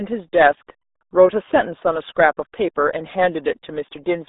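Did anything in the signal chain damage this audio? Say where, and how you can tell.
Yes, at the codec stage: the whole clip carries RealAudio 14.4 damage. The speech is muffled and gargly throughout, held to roughly 250 Hz to 3.7 kHz with nothing above 3.8 kHz. That heavy smearing fits a crude 8 kbit/s dial-up-era speech coder.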